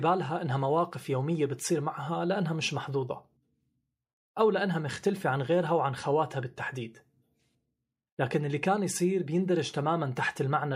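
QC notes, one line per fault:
Nothing here needs flagging, so there's no fault to log for this one.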